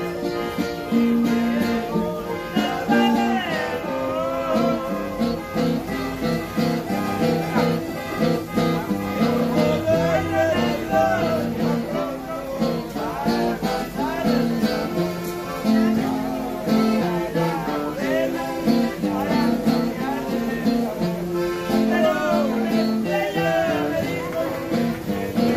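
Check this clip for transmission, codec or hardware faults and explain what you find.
One codec fault runs through the whole clip. MP2 compression is the likely cause: Layer II coding starved of bits, consistent with roughly 80 kbps, drops upper sub-bands intermittently and quantises the remaining ones coarsely. The audio sounds dull and carries a plainly audible gurgling, granular distortion, with high-frequency content flickering in and out.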